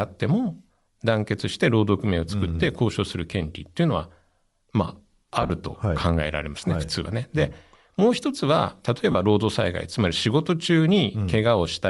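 Throughout the speech, a grainy, breathy upper edge is plainly audible, likely from Bluetooth LC3 compression filling the zeroed upper spectrum with noise, which fits a bitrate near 48 kbps.

From 5.42 to 5.50 s, lost LE Audio frames leave about 60 ms of noisy smear, the longest gap roughly 40 ms. At 9.12 to 9.15 s, a further 30 ms is concealed the same way.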